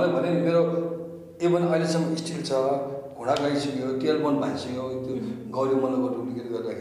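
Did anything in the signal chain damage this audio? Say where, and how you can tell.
No, nothing in the signal chain audibly damaged this audio. At no point does any stage of the path leave a mark on the sound that a listener could pick out.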